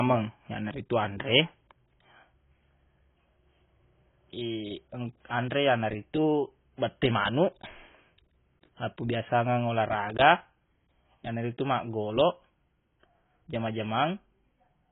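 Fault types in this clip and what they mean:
AAC compression: The speech has nothing above 3.8 kHz and sounds dull throughout. The damage is heavy, with smeared, fizzy sibilants. This likely comes from AAC-LC coding at a very low bitrate, near 16 kbps, where the encoder drops high bands to save bits.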